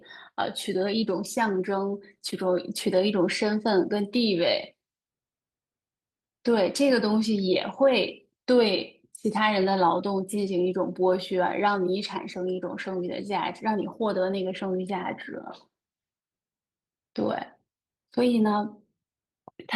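No technical faults are audible in this speech.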